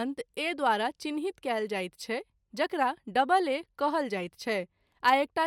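No technical faults can be heard anywhere in the speech.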